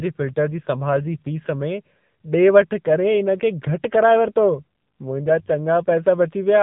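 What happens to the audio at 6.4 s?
At 6.4 s, as throughout the clip, the AMR narrowband mobile codec rebuilds the speech from a pulse-driven vocal-tract model, cutting everything above 3.8 kHz and leaving a buzzy, synthetic tone that suggests a low bitrate near 8 kbps.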